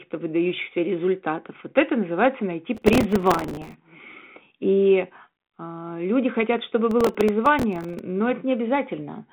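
From 2.75 to 3.74 s and again from 6.91 to 7.99 s, the speech is overrun by processor overload crackle. Deadlines for tiny buffers, on the order of a few milliseconds each, are missed in quick succession, and each miss replays a sliver of old audio with hard edges. The result is a gritty, tearing crackle laid over the telephone-band speech. It is denser in the first burst and stops as the load clears.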